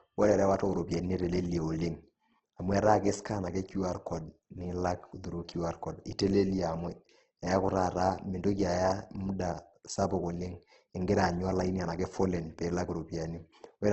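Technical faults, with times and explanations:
Throughout, Opus compression: speech sounds rough and grainy with nothing above 8.3 kHz, likely a bit-starved CELT encode filling bands with noise, fitting about 12 kbps.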